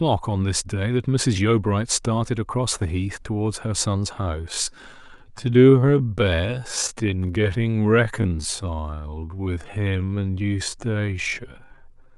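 From 4.36 s to the end, the speech abruptly slows to about 0.62× pace with unchanged pitch, sounding dragged: likely a time-stretched section.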